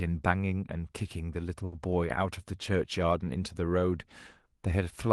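At 1.65 to 1.74 s, a short stall from a late packet: the jitter buffer ran empty, so the receiver stretched the last sound by about 70 ms and resumed without loss. It sounds like a held, faintly buzzy syllable. The spectrogram shows flat, frozen harmonics there, and the waveform shows repeated cycles with a slight dip in level. Throughout the clip the spectrogram is empty above 12 kHz, where the call codec's band ends.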